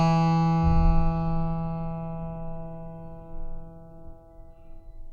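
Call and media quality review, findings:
No faults found in this music clip. Nothing here calls for follow-up.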